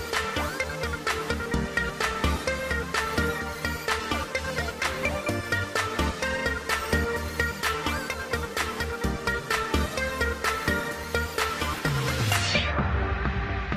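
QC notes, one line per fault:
No faults were found. Nothing in the audio needs a QC line.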